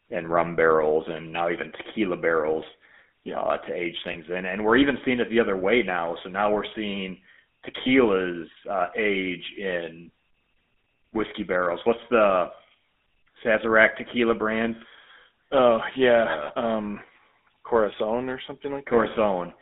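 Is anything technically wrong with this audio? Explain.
Yes. A GSM full-rate codec runs throughout. Its pulse-driven vocal-tract model gives buzzy, gravelly speech, fitting 13 kbps; the spectrogram shows nothing below 200 Hz or above 3.6 kHz.

Lost GSM frames occur at 4.12 to 4.15 s and at 7.82 to 7.88 s, just after "now we're seeing". The last good frame is repeated, giving a brief metallic ring that shows as smeared bands on the spectrogram.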